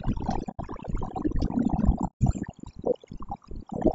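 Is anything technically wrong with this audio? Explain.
Yes. The speech has three problems.

Overdone noise removal runs through the whole clip. The noise reducer is set far too strong, so any frequency band near its noise estimate is pushed down or switched off, taking the quiet parts of the voice with it. The background drops to near silence dotted with twinkling specks. Ordinary hiss would sit as a steady wash. Here the noise has been hollowed out, leaving those flickering specks behind.

Throughout, the voice also sounds rough and grainy, with noise filling the gaps between harmonics and an upper band that sounds thin and synthetic. The likely cause is low-delay AAC compression of the kind used in video calls. Its short frames resolve pitch harmonics poorly, and a low bitrate, which fits something near 32 kbps, makes the damage plainly audible. That coarse low-bitrate coding is why noise fills the gaps between harmonics.

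AAC frame loss with muting causes two dropouts, one from 0.51 to 0.60 s and one from 2.06 to 2.22 s. The decoder zeroed the missing frames, and the overlapping windows fade the sound out and back in at the edges. The first gap lasts about 90 ms and the second about 150 ms, which fits three and five lost frames of about 30 ms each. Each one is a soft-edged hole, and that sets it apart from a hard digital dropout.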